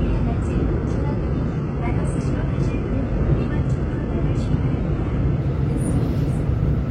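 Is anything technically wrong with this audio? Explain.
Yes, there is an adaptive stream starting at a low bitrate. From 0 to 5.41 s the player is on a low-quality version, and the treble sounds thin and partly synthetic, which fits a very low-bitrate HE-AAC encoding around 12 kbit/s. Once the connection is measured, it switches without a gap to a fuller version, likely AAC-LC near 96 kbit/s. On a spectrogram, energy stops at 10.6 kHz until 5.41 s, then widens abruptly. The waveform shows no break.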